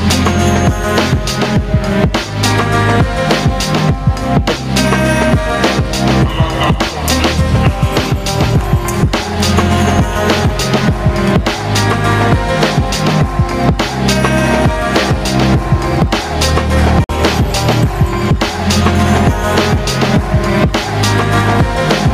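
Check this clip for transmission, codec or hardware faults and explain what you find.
Two faults are audible: gain pumping across the whole clip and a single Bluetooth stall near the end.

Gain pumping runs from start to finish. The level is pulled down by around 10 dB under each loud moment. This is likely because the input gain sits far too high and a fast limiter or compressor keeps clamping it. Unlike steady over-compression, the level moves with each loud sound. Loud and soft passages end up squashed toward one level.

The Bluetooth stall comes at 17.04 to 17.10 s, where the audio cuts to about 51 ms of clean silence and then resumes. The likely cause is interference delaying packets so the headphone buffer ran empty until retransmissions arrived. A codec dropout would usually leave smeared or concealed fragments. This break is a hard, silent gap.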